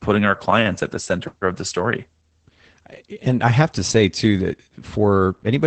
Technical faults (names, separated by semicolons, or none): Opus voice compression